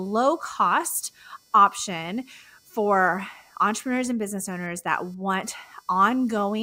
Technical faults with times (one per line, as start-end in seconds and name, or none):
0.00-6.63 computer activity noise